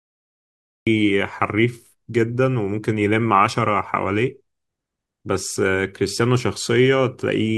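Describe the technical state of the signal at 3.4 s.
At 3.4 s the speech signal is intact, with no audible fault at that point.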